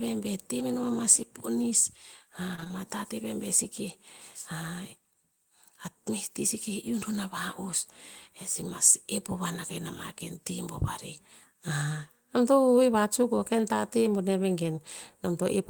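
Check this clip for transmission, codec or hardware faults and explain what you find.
One transmission fault is audible. From 2.55 to 2.72 s the speech turns choppy: repeated packet loss. Four short holes, the longest 24 ms, were each filled by extending the preceding sound, so about half of that stretch is patched-over audio rather than real signal.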